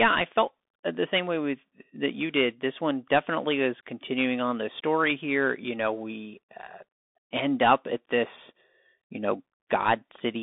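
From start to finish the speech passes through a Bluetooth CVSD headset codec, heard as a narrow, boxed-in band running from about 250 Hz to 3.6 kHz. On a spectrogram everything stops at a flat ceiling near 3.8 kHz, with the lows thinned below 250 Hz. The one-bit up/down coder, which fits a 64 kbps link, can't keep up with fast, loud swings, so peaks look rounded and slewed on the waveform, s sounds turn scratchy, and a granular hiss fills the gaps.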